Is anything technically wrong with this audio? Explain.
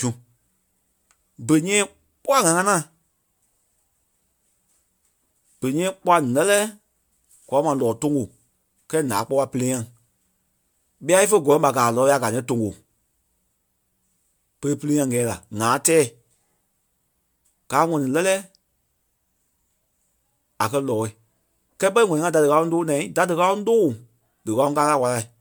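Yes. Throughout the speech there is generation loss: a swirly, smeared, hollow quality with blurred consonant onsets, though content reaches 20.1 kHz. This likely comes from about four successive MP3 encodes at a rate consistent with 128 kbit/s, each requantising on shifted frames so errors accumulate.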